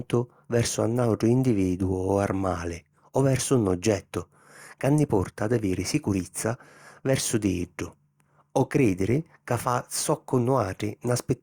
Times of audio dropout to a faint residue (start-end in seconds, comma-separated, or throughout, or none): none